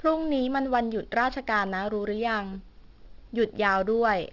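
Aliasing runs through the whole clip. Content above 6 kHz was folded back instead of filtered, consistent with a drop to a 12 kHz sample rate. Sibilants turn gritty and metallic, with false tones roughly 25 dB down. A spectrogram shows energy slamming into a hard 6 kHz ceiling, with mirrored streaks beneath it.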